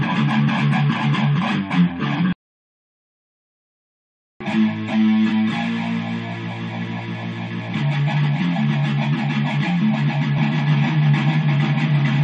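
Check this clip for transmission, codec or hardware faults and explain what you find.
One fault is present: a doubled audio track, running from 10.38 s to the end. From that point a second copy of the sound plays about a third of a second behind the first. It sits roughly 5 dB lower. The copy is full-band and dry, with no decay or room colour. It cuts in abruptly rather than fading up. The likely cause is a second capture through a slower path, or an edit holding two copies out of step.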